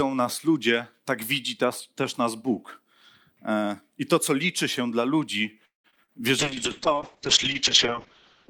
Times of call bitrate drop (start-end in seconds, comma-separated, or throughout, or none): 6.40-8.50